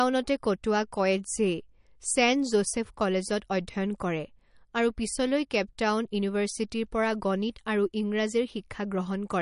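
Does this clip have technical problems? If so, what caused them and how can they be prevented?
Yes. The speech sounds watery throughout, likely MP3 compression starved of bits, which fits a 40 kbps rate. Encode at a higher bitrate or keep a lossless copy.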